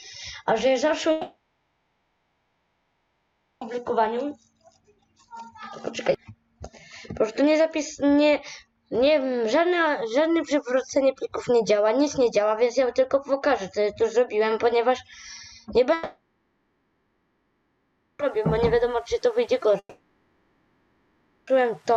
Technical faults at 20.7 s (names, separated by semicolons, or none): long network dropout